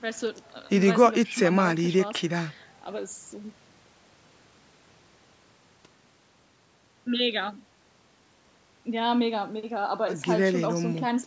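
No technical faults are audible.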